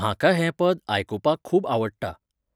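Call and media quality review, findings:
Nothing stood out on listening to this speech recording, so there are no findings to log.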